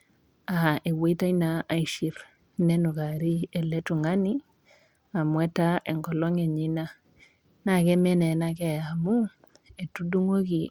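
From 2.07 to 3.51 s and again from 7.66 to 10.26 s the speech dulls and turns gritty. This is a Bluetooth SBC bit pool drop, consistent with the pool falling from 28 to 12: upper sub-bands starve and the rest quantise coarsely. Unlike packet loss, the sound never cuts out.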